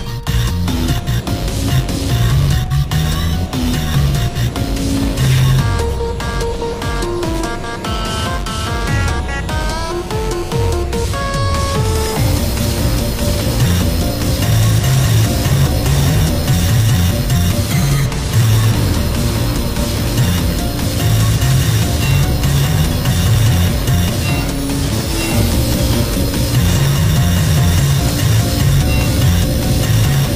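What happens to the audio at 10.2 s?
A GSM phone buzz runs from 9.61 s to 10.83 s, covering the 10.2 s point. A nearby 2G handset on a call transmits in bursts at about 217 Hz (216.7 Hz here), and the audio circuitry rectifies those radio pulses into the signal path. The result is a raspy, harmonic-rich buzz at that rate, unrelated to the audio beneath it, nearly steady in level throughout its span and sitting about 21 dB below the signal.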